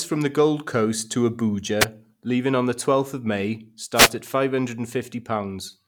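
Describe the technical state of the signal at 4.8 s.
At 4.8 s the speech signal is intact, with no audible dropout, clipping, distortion or other technical fault at that moment.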